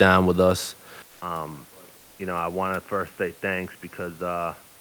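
A short speech recording. At 1.02 s the sound cuts out for 200 ms, then returns duller and about 10 dB quieter. From there to the end, nothing is heard above 3 kHz. A new, very faint hiss sits well below the speech. This is an input switched to a poorer device, likely a second microphone or a headset's call profile with a narrower band. From 1.97 to 2.19 s, a 220 ms pause loses its real room noise, which elsewhere sits about 32 dB below the speech. A smooth, featureless hiss replaces it, about 1 dB quieter. This is comfort noise in place of the background. The sender likely stopped transmitting during the gap, as Opus DTX does, and the receiver filled in synthetic noise.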